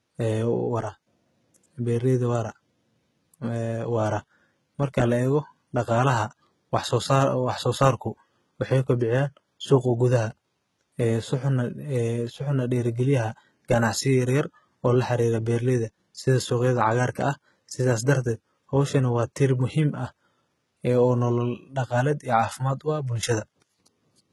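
Throughout the speech, the treble sounds synthetic. Nothing reaches above 11.8 kHz. S sounds turn gritty and metallic, with heavy damage. This is likely HE-AAC compression, rebuilding upper bands from copied lower ones, which fits a very low bitrate near 16 kbps.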